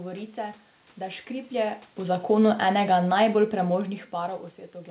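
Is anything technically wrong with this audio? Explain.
Yes. From 2.3 to 4.44 s, automatic gain falling: the gain control judged the input too loud or its background noise too strong and eased its gain down by about 4 dB. Unlike a talker drifting back from the microphone, the room noise sinks along with the speech.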